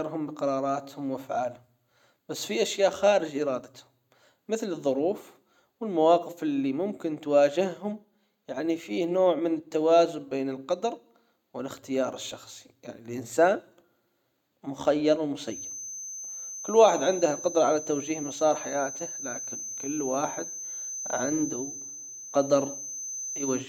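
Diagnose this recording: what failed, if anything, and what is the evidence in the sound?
A feedback whistle starts at 15.43 s and lasts to the end: a thin 6.2 kHz tone, roughly 10 dB below the speech, swelling and fading slowly. Likely cause: a loudspeaker-to-microphone loop in the analogue path, held at the edge of feedback. A spectrogram shows one unbroken horizontal line.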